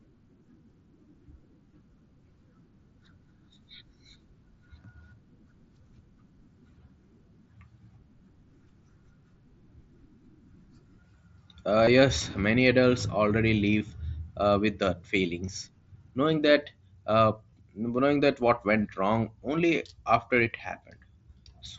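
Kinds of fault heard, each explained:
Concealed Bluetooth headset packet loss: dropped headset-to-phone packets, each patched by repeating the best-matching recent stretch of waveform. Six short gaps of 7.5 to 22.5 ms, at 1.71, 11.85, 13.79, 15.46, 17.50 and 20.59 s; the single-frame loss is nearly hidden, while the longer runs are heard as a brief buzzy tone with a small warble where real audio returns.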